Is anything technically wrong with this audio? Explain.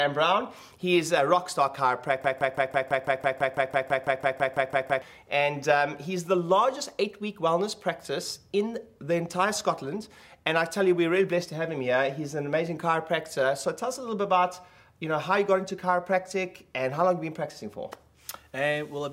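Yes. From 2.24 to 5.02 s, a broken-record loop repeats one 0.17 s fragment 17 times back to back, likely from a stalled player or stream, and the audio from that span is lost.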